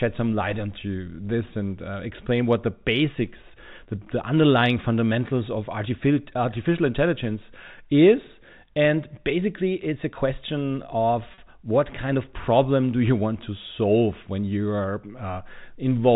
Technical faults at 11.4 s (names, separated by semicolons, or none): packet loss with pitch repetition